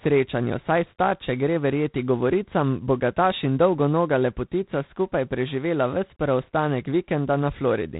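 From start to finish the speech carries G.726 ADPCM damage, and it is plainly audible. The codec sends only a few bits per sample describing how each one departs from a running prediction, and here the rasping, level-following hiss suggests a coarse step, which fits the 24 kbit/s mode. Nothing survives above 3.9 kHz. A spectrogram would show a hard ceiling at that line, with grainy noise filling the band beneath it and swelling wherever the speech gets louder.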